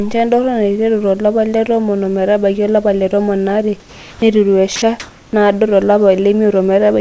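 From 3.80 to 4.22 s the background gives way to comfort noise in place of the background, likely generated during a transmission pause: a flat, detail-free hiss about 1 dB quieter that shows as an even, textureless band on a spectrogram. At 4.76 s a 60 ms stretch of speech is sound dropped by the voice detector, likely misjudged as background, leaving a brief flat-noise gap in the waveform. From 5.00 to 5.33 s comfort noise again replaces the background, likely from another pause, this time about 6 dB louder, a uniform smear. Throughout, nothing appears above 8 kHz, as expected from a wideband call codec.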